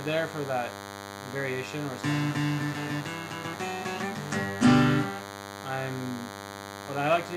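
A thin, steady buzz runs under the audio for its whole length. This is DECT cordless phone buzz. A nearby handset or base station sends radio bursts 100 times a second, and the audio circuit rectifies them. That gives a harmonic-rich 100 Hz tone, fairly loud and not far below the wanted sound.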